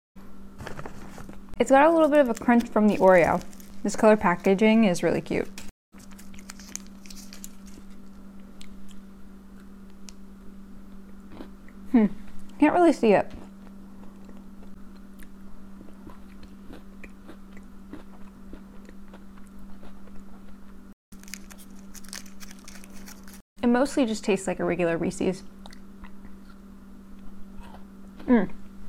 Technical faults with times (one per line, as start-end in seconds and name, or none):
3.62-5.53 mains buzz